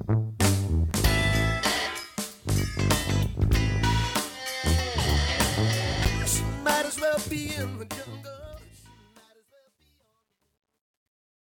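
Two blocks of digital silence drop in, one at 0.91 s lasting about 5 ms and one at 6.05 s lasting about 9 ms, each a hard cut to silence, so you hear a tick rather than a gap. The fade-out, which runs to 11.4 s, picks up truncation distortion from 7.26 s to the end. It gets grittiest from 8.72 s onward, which fits a volume stage working at about 11 bits without any dither.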